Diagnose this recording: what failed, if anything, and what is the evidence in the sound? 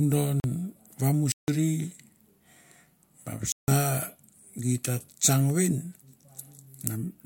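The driver or buffer stage failed: the audio path did not fill its output buffer in time on three occasions, and each time a block of digital silence went out in place of the speech. The signal drops straight to silence and back with no fade. The first gap, 0.40 to 0.44 s, lasts 40 ms. The other two, 1.32 to 1.48 s and 3.52 to 3.68 s, each last 160 ms and are heard as short holes.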